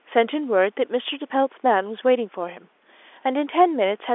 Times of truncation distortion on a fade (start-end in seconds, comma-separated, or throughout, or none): none